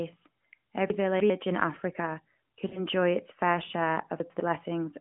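From 0.9 to 1.3 s the speech jumps about: chunks out of order. A 100 ms piece of audio plays three chunks later than it should, so the sound runs ahead, then steps back. Unlike a dropout, nothing goes missing. The fault is a reshuffle with hard joins at each seam rather than a gap or fade.

At 2.68 to 2.85 s there is a short warble and dip. These are lost AMR speech frames: about 40 ms of data failed, which fits two 20 ms frames. The decoder filled the gap by repeating the last good pitch and vocal tract settings at falling gain, so the sound smears and sags before recovering. That smooth, drawn-out concealment is unlike the abrupt splices of reordering. It all sits within a telephone band of roughly 150 Hz to 3.4 kHz.

From 4.2 to 4.4 s a second, smaller reorder occurs. One 100 ms chunk lands a single chunk late, giving a brief stutter.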